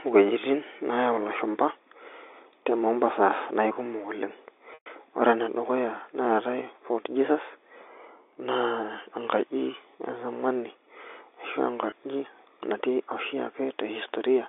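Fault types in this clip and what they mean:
packet loss with pitch repetition: From 4.74 to 4.86 s the sound sticks on a buzzy, repeated tone that fades into silence, then returns with a short cross-fade into "ore enedukuya neetai". At 11.90 to 11.92 s a much briefer gap comes across only as a slightly held, buzzy instant. The receiver lost 120 ms and then 20 ms of audio, which fits six packets and then one of 20 ms each. It filled each gap by repeating the last pitch period and fading it out.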